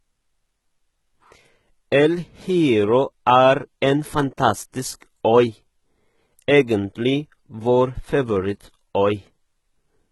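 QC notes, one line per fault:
Throughout: HE-AAC compression, heavy. Nothing is heard above about 11.8 kHz, and the upper band has a gritty, metallic edge on s sounds. This is likely a low-bitrate HE-AAC stream, around 16 kbps, rebuilding the treble by copying lower bands upward, so those harmonics don't align with the originals.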